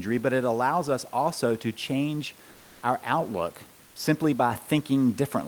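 From 2.51 to 2.81 s, between "us also to change" and "our outlook simply", the room noise, which sits about 30 dB below the speech, gives way to comfort noise in place of the background for about 300 ms. The likely cause is discontinuous transmission, consistent with Opus DTX: the sender paused during the gap and the receiver filled it with synthetic noise. The level holds steady, so this is not a gate or dropout; what changes is texture, with the room's detail flattened into smooth, featureless hiss.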